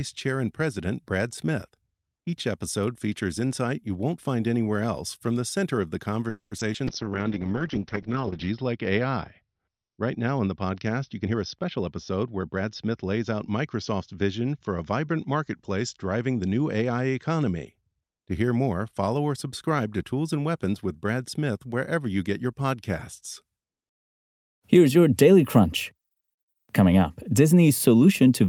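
Speech, with a burst of call-transport faults beginning just after "the center of the". From 6.29 to 6.53 s there is a call audio freeze: the last sound is stretched into a fading buzz that ends in about 90 ms of silence, and the audio then resumes where it stopped. About 220 ms of gap is inserted and nothing is lost, so everything after runs later. Delayed packets starving the jitter buffer are the likely cause. Immediately after, from 6.57 to 6.79 s, repeated packet loss gives a choppy, robotic texture. Four short holes, none longer than 10 ms, are patched by continuing the preceding sound, and roughly 80 ms of material is missing. A call bitrate drop runs from 6.88 to 17.73 s, where the sound becomes coarse and watery and loses its top end above 6 kHz instead of reaching 20 kHz. This fits the encoder being pushed from around 40 kbps down to about 7 kbps, staying at the bottom for about 1.6 s. 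Inside that stretch, a jitter buffer slow-down from 7.04 to 7.30 s plays the audio at 89% speed with unchanged pitch, as repeated pitch periods add 38 ms while the buffer rebuilds its reserve. From 11.21 to 13.05 s a jitter buffer speed-up does the opposite, running at 111% speed and sounding hurried as about a fifth of a second of surplus buffered audio is trimmed out.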